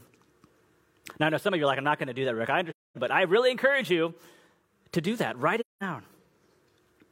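At 2.70 s the speech drops into a soft-edged silence until 2.98 s, just before "but I really encourage", and again from 5.59 to 5.83 s. That's AAC frame loss with muting: the decoder zeroed the missing frames' spectrum, so the overlapping windows fade out and back in.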